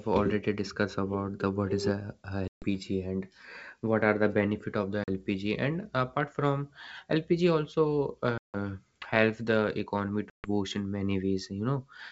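Speech carried over G.722 wideband, showing packet loss on an ADPCM call: hard-edged silent gaps at 2.48–2.65 s, 5.04–5.08 s, 8.38–8.55 s and 10.30–10.48 s (roughly 140, 40, 160 and 140 ms of lost audio). On a waveform these appear as flat silent stretches with abrupt edges, and on a spectrogram as blank vertical bands. Each gap swallows a few packets, leaving the decoder's predictor and step size out of step with the sender's, so the audio resumes with brief distortion before settling.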